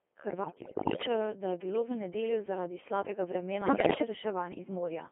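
The speech runs throughout through a Codec 2 vocoder, which transmits only pitch, voicing, energy and a coarse spectral envelope and rebuilds the voice from sine waves. Its heavy, buzzy, robotic quality suggests roughly 2.4 kbit/s, with the band confined to 250 Hz to 3.5 kHz. From 0.44 to 1.06 s and again from 3.62 to 4.02 s, bit errors on digital voice radio corrupt around one bit in seven reaching the decoder, scrambling whole frames' pitch, level and voicing, so the voice lurches in pitch and loudness and dissolves into warbling, bleeping gibberish.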